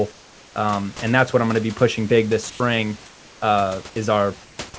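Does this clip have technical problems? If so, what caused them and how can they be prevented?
Yes. In the pauses at 0.12–0.56 s, 2.50–2.60 s, 3.06–3.42 s and 4.44–4.58 s, the room background turns flat and featureless, about 3 dB quieter except at 2.50 s. This is likely comfort noise in place of the background: discontinuous transmission stopped sending during silence, and the receiver synthesised a smooth stand-in for the real room noise. To prevent it, disable discontinuous transmission (DTX) on the sending side.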